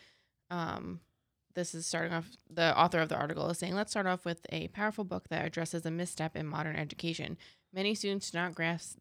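No technical faults are audible.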